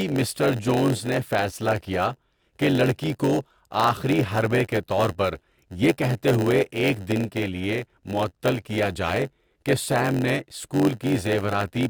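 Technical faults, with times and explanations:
Throughout, block size mismatch (padded): one stage hands over blocks shorter than the next stage expects, and the leftover space in each block is filled with silence. That tiny gap repeats at about 91.9 Hz, which is heard as a steady low buzz riding under the speech. Because every block carries some padding, the speech runs at 0.919 times its normal speed. It sounds slightly slowed but keeps its timbre.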